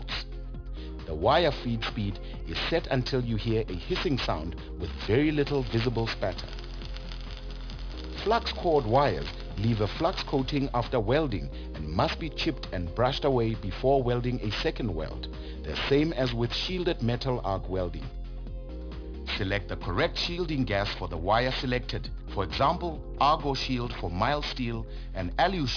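All the way through, there's aliasing: the sound seems to have been downsampled to around 11 kHz without a proper low-pass, so content above 5.5 kHz folds back down. Those reflections sit fairly close under the real signal, giving sibilant-type sounds a gritty, metallic edge.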